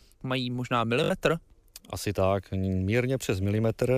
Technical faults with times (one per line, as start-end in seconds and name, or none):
1.04-1.10 Bluetooth stutter